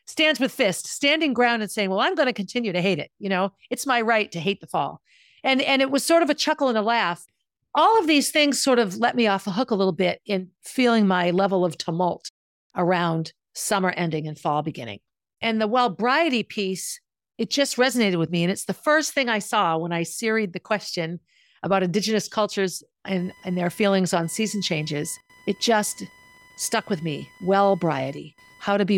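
From 23.18 s to the end, a faint chirping buzz pulses about a thousand times a second, roughly 30 dB under the speech. This is computer activity noise: shifting processor or graphics load disturbs the audio circuit's shared ground, so the buzz follows the machine, not the speech.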